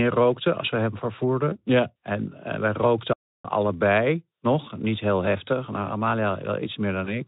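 At 1.50 s, just after "rookten als we hem", and again at 7.04 s, VoIP packet loss concealed by the speech codec: each gap fits one lost 20 ms frame, which the decoder filled by extending the last pitch and filter at falling gain. This gives a short buzzy or noisy smear, with the sound staying thin until 1.58 s and 7.19 s.

From 3.13 to 3.45 s a playback stall cuts the sound dead for about 0.31 s before it resumes with "allebei nog". The likely cause is the player running out of buffered data or its thread being blocked.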